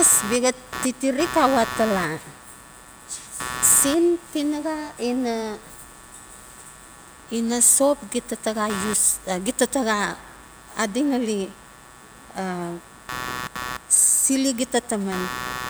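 A speech recording carries a buzzy, chirping rasp under the speaker from start to finish, pulsing at something like 150 times a second and sitting only about 15 dB below the speech. This is computer activity noise: changing load on the processor, graphics card or mouse shifts the ground shared with the audio circuitry, so the interference follows the machine's activity rather than anything in the sound.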